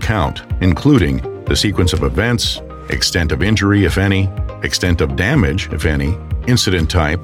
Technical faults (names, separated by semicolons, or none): none